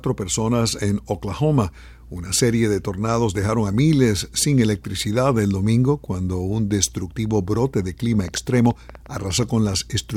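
A train of clicks, about fifteen uneven pops near 10 per second at roughly signal level, ticks over the sound from 8.20 to 9.44 s, likely from interference or a faulty connection.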